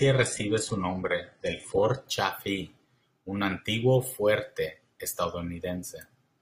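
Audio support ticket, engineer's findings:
Adaptive stream starting at a low bitrate, 0.0 to 2.0 s: dull, smeared speech with nothing above 11.1 kHz and synthetic-sounding highs, which fits a very low-rate HE-AAC start. Player begins cheap to start fast, then steps up once throughput is measured. At 2.0 s the quality jumps, consistent with AAC-LC near 96 kbit/s. Distinguishing sign: a clean switch with no gap, stutter or rebuffer, and it happens only at startup.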